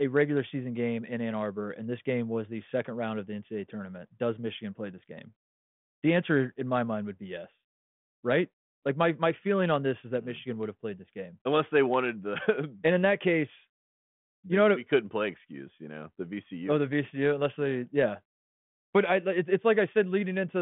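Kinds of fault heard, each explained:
No kinds of fault are heard in this clip.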